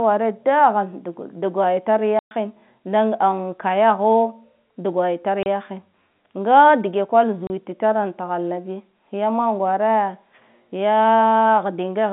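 Packet loss filled with silence at 2.19 to 2.31 s, 5.43 to 5.46 s and 7.47 to 7.5 s: missing packets were replaced with dead air, leaving 120 ms and 30 ms holes with hard edges. The gap lengths fit 30 ms packets, with the first hole spanning about four.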